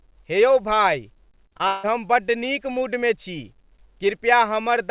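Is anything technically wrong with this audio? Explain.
Yes. From 1.48 to 1.85 s there's repeated packet loss with a robotic sound: four gaps in quick succession, the longest 161 ms, with roughly two thirds of that stretch patched by stretching the last sound forward. The result is choppy speech with bits missing. The call path's cutoff at 4 kHz fits a narrowband codec like G.711.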